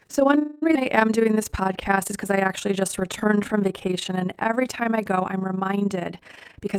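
The speech here was split into windowed frames and put back together with an overlap whose windows do not add up to a steady gain, producing overlap-add ripple across the whole clip. The level swings by about 11 dB once per frame, at roughly 30 times a second. That regular pumping lays a fast, rough flutter over every stretch of sound, giving the speech a rough tremolo from the first moment to the last.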